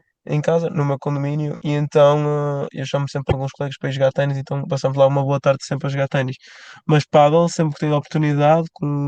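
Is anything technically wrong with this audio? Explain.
Yes. From 3.28 to 3.34 s the speech is interrupted by a short glitch lasting about 56 ms, the mark of damaged data in a compressed stream. A stretch of the encoded bitstream there is corrupt, so the decoder reads garbage where valid frames should be. It produces nonsense output or drops those frames, loses frame sync, and scans forward for the next valid header before normal decoding resumes.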